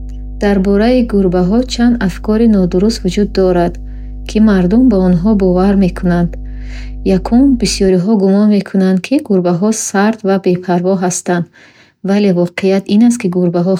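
Right from the start and up to about 7.89 s there's mains hum under the speech, a steady 50 Hz drone sitting fairly high relative to the voice. That's the power line leaking into the signal, most likely through a ground loop or a nearby transformer.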